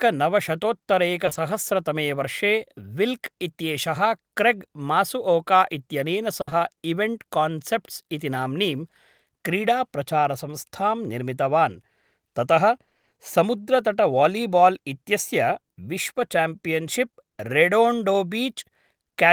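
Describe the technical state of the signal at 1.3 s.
At 1.3 s the speech passes through short concealed packet loss, three back-to-back 20 ms holes spanning about 1.25 to 1.37 s. The receiver bridges each by extending the preceding sound's pitch or noise, so instead of silence, as a plain dropout would leave, you hear a brief smeared wobble.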